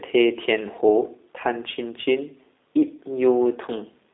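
From start to finish the speech carries G.729 codec damage, and it is plainly audible. The sound is rebuilt from a vocal tract filter, a pitch predictor and a few pulses per 10 ms frame, which gives the speech a rough, slightly synthetic texture, consistent with the G.729A variant at 8 kbit/s. The line band runs from about 250 Hz to 3.7 kHz, and nothing is present above 3.8 kHz, so the audio sounds narrow and muffled.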